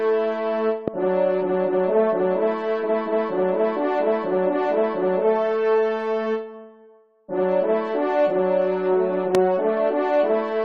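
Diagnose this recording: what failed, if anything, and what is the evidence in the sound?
Two loud pops cut in, at 0.88 to 0.90 s and 9.35 to 9.37 s. Each is a single sharp hit about 15 dB above the signal. The sound carries on beneath it. The stage is likely analogue wiring, where a plug, switch or static discharge injects a brief voltage step.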